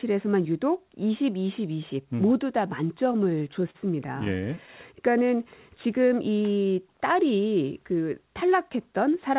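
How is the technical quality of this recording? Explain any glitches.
The recording has audible timing glitches from network jitter. The speech is band-limited, with nothing above 4 kHz and the usual coding noise, which fits a narrowband 64 kbps G.711 A-law call path.

Repeated stalls (stutter), 3.04 to 4.70 s: the jitter buffer ran dry fifteen times, with gaps up to 39 ms. The receiver stretched the last sound to cover 175 ms in total, so the speech drags and stutters without losing anything.

Jitter buffer slow-down, 4.96 to 5.38 s and 5.88 to 6.34 s: repeated pitch periods added 55 ms and 42 ms. The speech plays at about 89% and 92% of normal speed at unchanged pitch, sounding drawn out.

Jitter buffer speed-up, 8.35 to 9.29 s: the receiver removed short pitch-period pieces, around 70 ms in total, to shed excess delay. The speech plays about 7% fast at the same pitch and sounds hurried.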